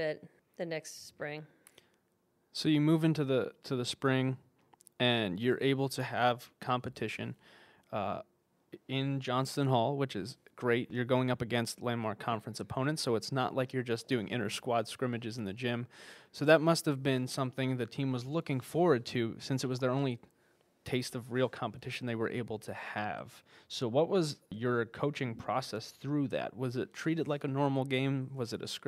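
No technical faults are audible anywhere in the recording.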